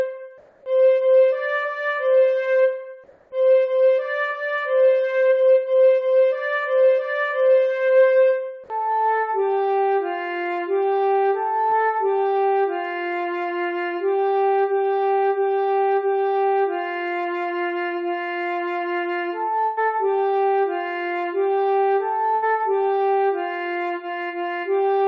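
From 0.38 to 0.66 s, and again from 3.04 to 3.32 s, the quiet background turns into a flat, featureless hiss for 280 ms, about 2 dB softer than the surrounding room sound. This is likely comfort noise in place of the background: the sender paused transmission, and the receiver filled the gap with synthetic noise.

From 11.70 to 11.74 s, a brief smear about 20 ms long marks a short concealed packet loss. The decoder bridged the missing piece by extending the sound just before it.

Two bursts of packet loss follow, from 19.66 to 19.79 s, where about 120 ms is missing, and from 22.35 to 22.44 s, where about 80 ms is gone. In each, the last sound is held and fades away, and the audio then resumes further on.

Throughout, nothing is heard above 8 kHz, which fits a wideband call codec.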